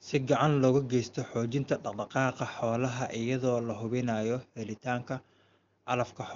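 No technical faults can be heard in the speech. It carries the AMR wideband (HD Voice) codec with at most faint coding damage, consistent with one of its highest rates, and nothing is present above about 7.4 kHz.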